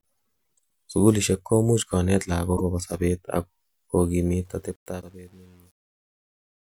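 A speech recording with two kinds of fault. Damaged data in a compressed stream: corrupted bytes made the decoder misread frames and lose sync while it hunted for the next valid header, giving short glitches at 2.53 to 2.61 s and again at 4.98 to 5.03 s. Truncation distortion on a fade: the fade-out beginning around 4.5 s went through an undithered gain stage, and the grain suggests only about 9 bits were kept. From 4.45 s the tail turns gritty, and from 4.84 s to the end the quietest part collapses into coarse steps.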